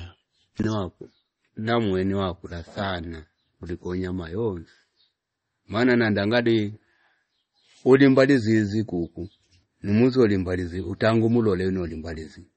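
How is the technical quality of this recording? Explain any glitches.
The quality's pretty rough, with compression damage plainly audible across the whole recording. It sounds like MP3 compression, most likely at a low bitrate around 32 kbps. The top end stops dead at about 8.4 kHz, so the speech sounds dull, and the s sounds lose their crispness. The encoder is also short of bits, so it drops the weaker frequency lines and they flicker on and off between frames. That gives the whole thing a watery, swirly texture, with metallic chirps on the sibilants and some smearing on the attacks.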